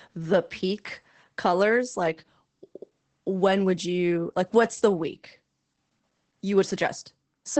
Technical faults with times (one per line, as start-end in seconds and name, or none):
0.00-7.60 Opus voice compression